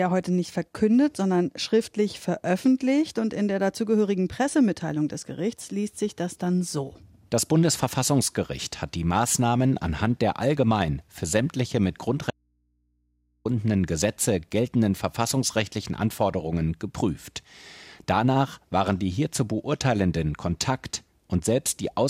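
Audio dropout to a faint residue at 12.31–13.45 s, after "allgemein für sämtliche mit": the speech cuts abruptly to hum about 45 dB down, likely a lost signal on a still-live input.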